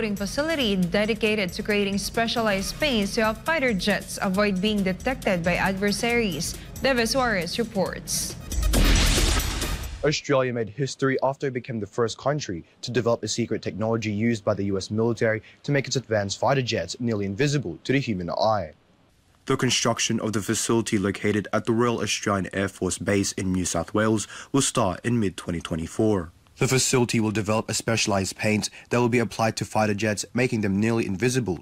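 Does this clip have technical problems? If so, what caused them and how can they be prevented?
No, nothing in this recording stood out as a technical problem on listening, so there is nothing here to trace back or prevent.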